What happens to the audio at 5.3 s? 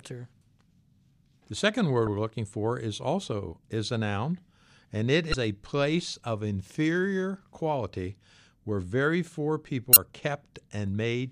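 Right after "a noun and it", from 5.31 to 5.34 s, damaged data in the compressed stream makes the decoder misread frames and hunt for the next header, giving a brief glitch before "a place of inferior". A spectrogram and waveform show a short break in continuity there.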